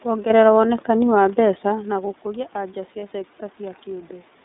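Throughout, the speech passes through the iLBC codec, a narrowband coder that encodes each frame's excitation on its own. Here the frames are 30 ms, which fits its 13.33 kbps mode. The line band runs only from 200 Hz to 3.7 kHz, so everything above is missing and the low end is thin. The coding damage is plainly audible: a rough, slightly synthetic texture sits on every syllable.

Around 1.5 s the talker moves away from the microphone, and the level reaching it falls by about 14 dB. In response, the automatic gain control rises from 1.65 s to 4.18 s. It gradually adds about 4 dB, which makes up only part of the drop. Over those two and a half seconds, the voice and the room noise swell together, so the background comes up along with the speech instead of staying put.

From 3.00 to 3.03 s, one iLBC frame, 30 ms of audio, was lost. The decoder filled the gap by repeating the last pitch cycle mixed with noise. 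That patch sounds like a brief, slightly buzzy held vowel. Because each iLBC frame decodes independently, the speech returns to its normal coded quality immediately afterward.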